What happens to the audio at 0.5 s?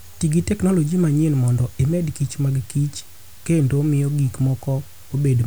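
At 0.5 s the speech carries a steady, even hiss from low bit depth with dither. Dithered 7-bit rounding turns the quantisation error into white noise about 25 dB below the signal, present throughout the clip.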